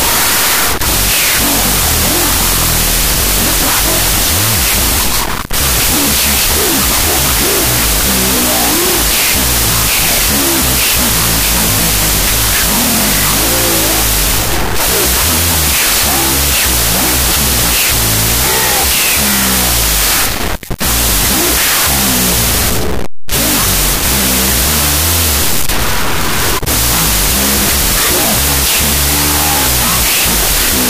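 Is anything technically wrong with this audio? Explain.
Yes. Wrong sample width runs throughout: the speech seems to have been stored as 32-bit floats but read as 16-bit integers, so each value splits into mismatched halves. The result is loud noise, with the speech buried and playing at half speed and pitch.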